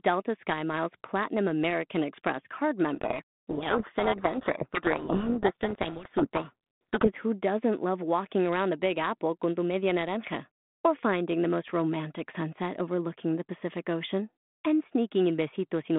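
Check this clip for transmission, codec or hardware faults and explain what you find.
From 2.94 s to 7.09 s the speech is buried in harsh, grinding distortion. This is a codec payload misread: the G.726 code words are packed in a different bit order than the decoder expects, so the prediction differences decode wrongly until both ends agree again.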